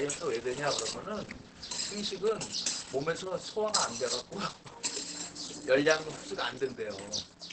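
Sounds, muffled and hoarse throughout, with nothing above 8.6 kHz. Likely heavy Opus compression, in its speech mode at a low bitrate.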